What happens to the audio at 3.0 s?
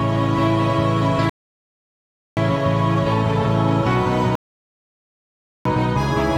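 Nothing goes wrong at 3.0 s; the audio plays through that moment intact, with no dropout, click or distortion.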